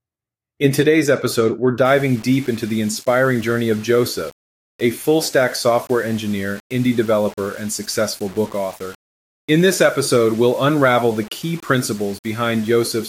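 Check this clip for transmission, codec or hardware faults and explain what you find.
One fault is present: low bit depth without dither, from 1.85 s to the end, starting after "today's episode we're". The speech turns grainy, with distortion roughly 25 dB below the signal that follows the sound, likely from rounding to about 6 bits without dither.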